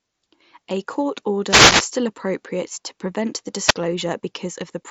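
At 1.45 s the radio link of an analogue FM wireless microphone fades as reflected signals cancel. Receiver noise rises over the speech as a swish of static lasting about 0.4 s, to 1.87 s. A second, shorter wireless microphone noise hit at 3.65 to 3.74 s gives a brief burst of static. Both bursts sit within the headset's band, which the mSBC link limits to about 7.7 kHz.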